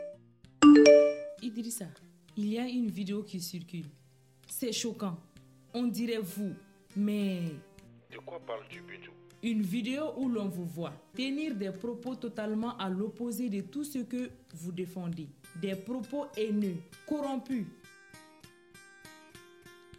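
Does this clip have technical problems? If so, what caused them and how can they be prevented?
No, the signal is technically sound throughout, with nothing to trace to a cause or guard against.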